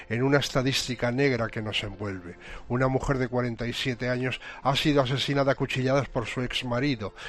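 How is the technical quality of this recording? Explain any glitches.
No audible glitches or faults.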